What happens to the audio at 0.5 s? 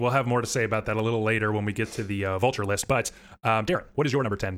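Nothing goes wrong at 0.5 s: the speech plays through that moment intact, with no dropout, click or distortion.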